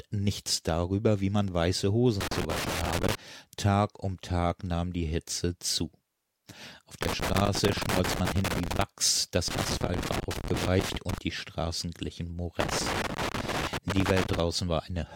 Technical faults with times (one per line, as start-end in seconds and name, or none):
2.21-3.15 loose connector crackle
7.02-8.82 loose connector crackle
9.48-11.18 loose connector crackle
12.60-14.40 loose connector crackle